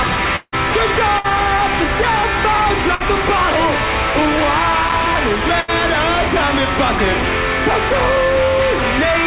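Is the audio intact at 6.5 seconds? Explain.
Yes, the audio at 6.5 seconds is intact, carried through the call path with nothing heard above 4 kHz, which fits G.711 A-law at 64 kbps.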